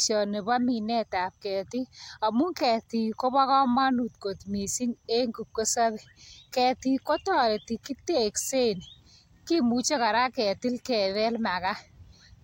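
Speech recording with no audible technical faults.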